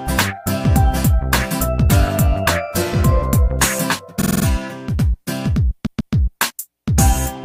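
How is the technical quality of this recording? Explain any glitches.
The recording has two stutters caused by repeated frames. From 4.21 to 4.44 s, a 46.4 ms block plays five extra times, adding 232 ms. From 5.85 to 6.13 s, a 139.3 ms block plays twice more, adding 279 ms. Compressed frames were written more than once, so the decoder replays the same slice of sound. On a spectrogram this shows as identical vertical stripes repeating side by side, and on the waveform as copied segments with small jumps where they join.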